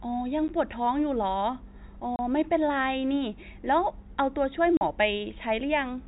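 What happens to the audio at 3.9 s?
Nothing goes wrong at 3.9 s: the speech carries on intact through that moment, with only the narrow telephone-band sound of its G.711 coding.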